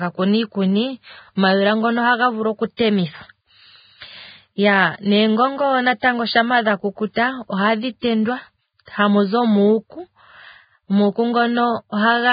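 The whole speech clip sounds hissy and grainy, with a dull top: nothing is present above 4.9 kHz, and the treble that remains is rough and noisy rather than clean. This is likely heavy Vorbis compression at a very low bitrate, around 15 kbps by the sound of it. The encoder has lowered its cut-off and quantised the upper residue so coarsely that fine detail has turned into noise of similar energy.

A short burst of hiss precedes a sharp onset at 2.77 s, just after "ngono ohaga vulu oku", and again at 6.00 s, 7.14 s, 8.00 s and 8.85 s. The attacks themselves sound soft and smeared. This is pre-echo. Each onset falls late in a transform block, and the quantisation noise sized for the loud attack is spread back across the quiet moment before it. The hiss arrives roughly 22 to 30 ms early.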